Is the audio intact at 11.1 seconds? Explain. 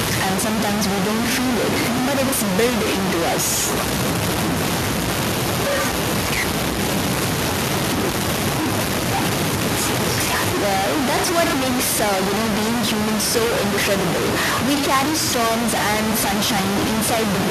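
No, at 11.1 seconds the speech is grainy and gritty throughout, sounding like low bit depth without dither, likely truncation to about 3 bits, so the distortion is roughly as loud as the speech itself.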